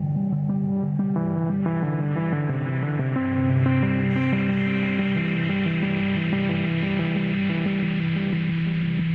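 Nothing in this recording of sounds points to a technical fault, and the signal holds steady with no audible disturbance anywhere along its course.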